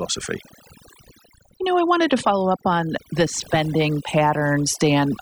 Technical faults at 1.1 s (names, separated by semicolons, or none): overdone noise removal